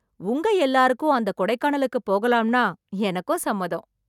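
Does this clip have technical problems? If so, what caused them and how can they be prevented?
No, no technical faults heard.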